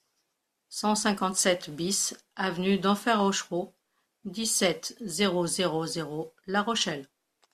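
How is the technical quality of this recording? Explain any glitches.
The technical quality of this recording is sound, with no glitches to explain.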